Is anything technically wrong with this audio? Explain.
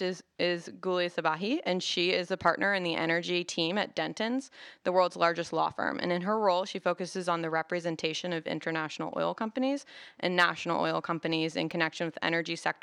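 Yes. There are CD scratch ticks from 11.13 to 11.71 s, just after "companies and national oil". Four short ticks occur, about seven a second. The longest lasts around a millisecond. A scratch on the disc spoils more data than error correction can rebuild. It passes the laser once per turn, so the damage repeats at a steady rate. The player patches or mutes those few samples. Each patch is heard as a tiny click.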